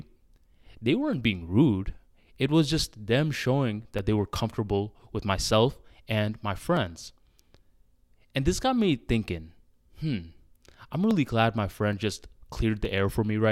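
Speech with six sharp, isolated clicks at 3.99, 6.77, 8.63, 11.11, 11.93 and 12.85 s, likely from dropped samples: each time, less than a millisecond of the stream goes missing, so the waveform jumps abruptly and leaves a thin broadband tick.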